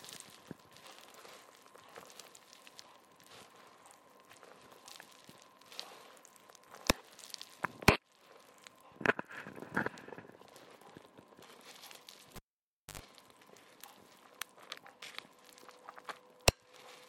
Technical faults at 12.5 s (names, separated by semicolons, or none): cable pulled and plugged in